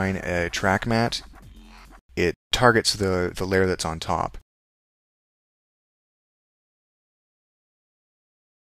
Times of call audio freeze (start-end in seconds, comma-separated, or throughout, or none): none